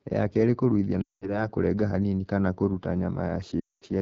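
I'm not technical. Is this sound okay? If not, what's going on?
No. There are two problems.

The whole recording went through the AMR wideband (HD Voice) codec, the compression phone networks use for HD calls. Here it ran at one of its lowest quality settings. To save data, it rebuilds the speech from a simple model of the voice. At this setting that model is too coarse. So the speech sounds rough and raspy from start to finish. The top end is filled in with shaped hiss rather than the real sound.

There are also two stretches of lost AMR speech frames. These are chunks of the call that got damaged over the radio link and were thrown away. The phone tries to cover each gap by repeating the last good sound more and more quietly. The first gap runs from about 1.02 to 1.48 seconds, with about 0.2 seconds missing. The second runs from about 3.60 to 3.84 seconds, with a little more missing. 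In both, the speech quickly drops to near silence. It comes back weak or rough for a moment.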